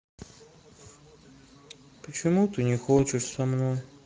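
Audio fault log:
Throughout: Speex codec, damage plainly audible, speech sounds hoarse and grainy because the CELP excitation gets too few bits; 16.8 kbps fits a lower quality setting.
2.97 to 3.00 s: VoIP packet loss concealed by the speech codec, about 20 ms dropped, filled by stretching the last pitch into a brief, fading smear.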